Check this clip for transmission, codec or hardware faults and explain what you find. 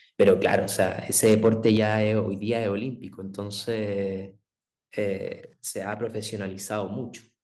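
Two kinds of fault are present: repeated microphone overload and one microphone volume step-down.

From 0.21 to 0.85 s and 1.24 to 1.94 s, the loudest syllables crackle harshly. This is likely microphone overload: peaks about 5 dB and 4 dB too hot are flattened at the converter's limit.

At 1.77 s, voice and background drop together by about 6 dB, likely because software stepped the microphone volume down after the distorted peaks.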